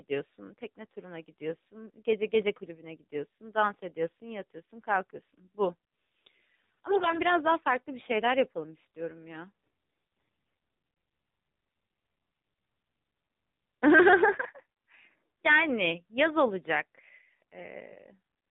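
Buzzy, synthetic speech with nothing above 4 kHz runs through the whole clip. This is the AMR narrowband mobile codec, which rebuilds the voice from a vocal-tract model driven by a few pulses per frame. The degree of buzz points to a low rate of about 7.4 kbps.

From 6.90 to 7.21 s, and again from 9.90 to 10.54 s, the voice turns hoarse, scratchy and gargly while roughly keeping its pitch and level. These are AMR bit errors. Around one in ten of the weakly protected bits arrived flipped, so the driving pulses land in the wrong places and the fine gain and spectrum values drift.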